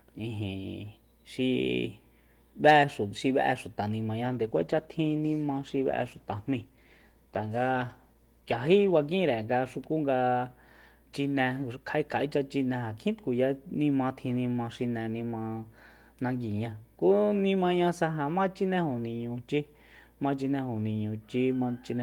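From 4.32 to 9.79 s, a call bitrate drop coarsens and dulls the speech, consistent with roughly halving from 32 to 16 kbps. Unlike packet loss, there are no gaps.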